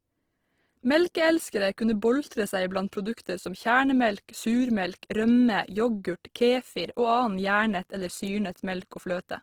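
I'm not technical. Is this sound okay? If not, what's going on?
No. The most likely cause is Opus compression, a squeezing method used to send audio over the internet with very little data. With too little room, the system couldn't record every fine detail, so it kept the rough loudness of each pitch range and filled the gaps with borrowed or noise-like material. From start to finish the speech keeps its brightness but sounds noticeably grainy, rough and hissy in texture.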